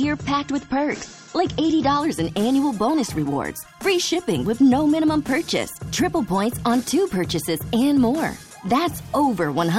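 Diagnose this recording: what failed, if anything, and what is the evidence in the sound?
At the network and codec stage, an adaptive stream starting at a low bitrate: from 0.0 to 2.0 s nothing reaches above 8 kHz and artefacts thicken, which fits an MP3 near 32 kbit/s. A spectrogram shows a hard ceiling until a gapless jump to wider treble, consistent with a step to about 128 kbit/s.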